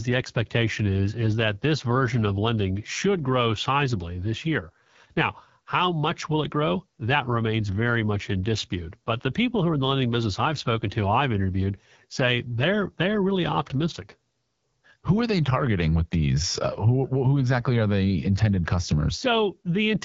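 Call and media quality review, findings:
Rough, raspy speech throughout, nothing above 7.5 kHz. AMR wideband (HD Voice) codec at a low mode (fits 8.85 kbit/s) starves the pulse-excited vocal-tract model.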